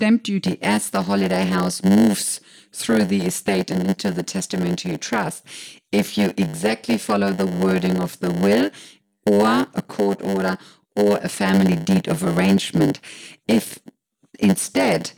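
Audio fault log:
0.44 s to end: block size mismatch (padded). From 0.44 s onward, one stage hands over blocks that are shorter than the next stage expects to read, so the tail of every block is filled with silence. Those tiny zero gaps recur about 100 times a second, giving a steady 100 Hz buzz under the speech. Because padding stretches each block, the speech plays at 0.919 of its proper speed, while its timbre stays about where it should be.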